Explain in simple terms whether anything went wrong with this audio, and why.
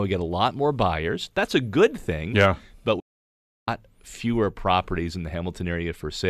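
Something did go wrong. The speech drops out completely at 2.99 seconds and comes back at 3.68 seconds. That gap lasts about seven tenths of a second. This is a digital broadcast dropout. The receiver stopped getting usable data, so it muted itself. The sound fades out very fast, in a few thousandths of a second, so it feels like a sudden cut. Whatever was said during the gap is gone for good.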